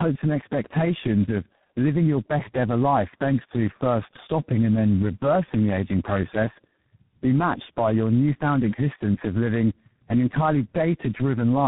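Tandem speech coding runs through the whole of this speech clip: the call crossed several networks in a row, each with its own speech codec, so the voice was decoded and re-encoded at every border, and each coder had to model the previous one's errors as if they were speech. The sound points to three such coders in series, likely ending in G.726 at 24 kbit/s, with nothing above 3.8 kHz, leaving it muffled, rough and warbly.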